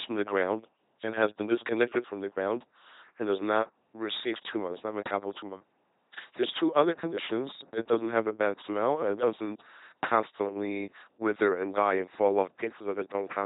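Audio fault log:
throughout: LPC-10 vocoder. The speech sounds heavily damaged, a buzzing mechanical robot voice with nothing above 3.8 kHz. A simple vocal-tract filter is driven by either a pulse train or noise, never a mix, and the coarseness fits a 2.4 kbit/s rate.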